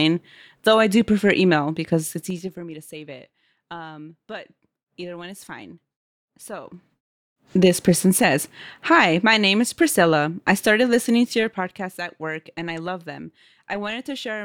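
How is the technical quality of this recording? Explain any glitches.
The speech has three bursts of zipper noise, at 2.05 to 2.56 s, 6.57 to 7.34 s and 11.26 to 11.78 s.

Zipper noise, 2.05 to 2.56 s, between "I do prefer email" and "me to save it": the level drops by about 20 dB in 3 dB jumps, around ten a second. Each jump clicks, giving a ticking rasp.

Zipper noise, 6.57 to 7.34 s, just before "this person says": the level rises by about 20 dB in 2 dB steps, again around ten per second. Each unsmoothed increment adds a small tick.

Zipper noise, 11.26 to 11.78 s, between "I started listening" and "at work and I": the level falls by about 10 dB in 2 dB steps, producing a shorter run of ticks.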